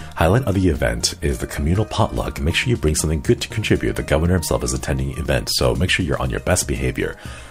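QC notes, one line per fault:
No faults to note.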